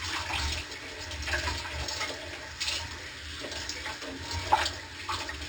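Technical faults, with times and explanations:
Throughout, imaging from linear upsampling: the top end sounds dulled, with a faint metallic shimmer between 6 and 12 kHz about 15 dB below the sound. Straight-line interpolation, which fits a rate raised from 12 kHz to 44.1 kHz, filters weakly, leaving mirrored spectrum copies there.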